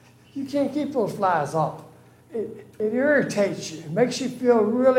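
Damaged data in a compressed stream shows up at 2.80 s as a very short blip, about 4 ms long, in the audio. Corrupted bytes there leave the decoder unable to read that frame correctly, so it loses sync and searches for the next valid frame header.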